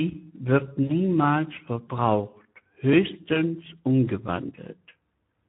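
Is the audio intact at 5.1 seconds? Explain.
No. Speex codec damage runs through the whole clip, including 5.1 s. Starved excitation, fitting roughly 11 kbps, makes speech hoarse and noisy.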